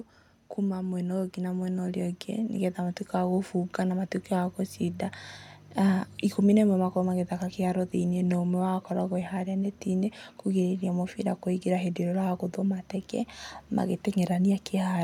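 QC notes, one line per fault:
0.7–3.06 s, automatic gain rising: the gain control judged the input too quiet and stepped its gain up by about 6 dB over roughly 2.4 s, so speech and background noise swell together. On a waveform the envelope widens steadily; a spectrogram brightens evenly across all frequencies, noise floor included.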